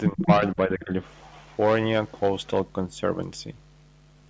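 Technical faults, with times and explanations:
0.09–0.91 s, speech suppressed in double talk: the speech dips by as much as about 15 dB in patches adding up to roughly half a second, sounding clipped and pumped rather than evenly quieter. The likely cause is an echo canceller failing to separate its own talker from the overlapping loudspeaker echo of the far side and ducking everything. On a waveform the envelope shows sudden notches; on a spectrogram the energy thins out in vertical gaps.
0.2–0.25 s, echo leak: a brief scrap of sound returns 482 ms after its original, sitting about 15 dB below the direct speech. This is likely residual loudspeaker pickup that the loudspeaker side's canceller failed to remove and sent back down the line. A spectrogram shows a faint copy of earlier harmonic structure, inside the same band that stops at 8 kHz. The waveform shows only a small bump.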